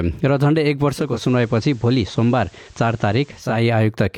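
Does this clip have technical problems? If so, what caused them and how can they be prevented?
Yes. From 0.93 s a faint hiss appears, roughly 35 dB below the signal, and the level drops by about 1 dB. It returns to full clarity at 3.66 s. This is digital radio blending to analogue. The receiver lost the digital stream and cross-faded over about 0.37 s to the station's FM broadcast, whose noise floor accounts for the change, then faded back. Better antenna placement or a stronger digital signal would prevent the blend.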